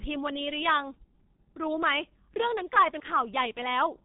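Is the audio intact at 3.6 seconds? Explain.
No, 3.6 seconds falls within G.723.1 codec damage spanning the whole clip: 6.3 kbit/s frames leave nothing above 3.8 kHz, and the slowly updated voice model makes the speech hoarse and consonants blurred, unlike a simple low-pass filter, which only muffles.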